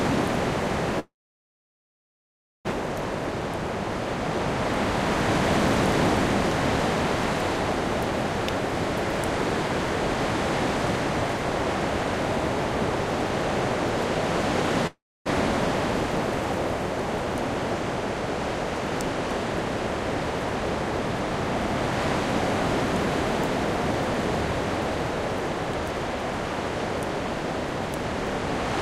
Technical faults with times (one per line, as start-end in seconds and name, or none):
0.99-2.73 long network dropout
14.87-15.32 long network dropout